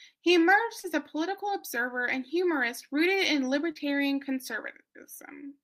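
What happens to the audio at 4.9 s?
Nothing goes wrong at 4.9 s; the speech carries on intact through that moment with no dropout, click, glitch or other audible fault.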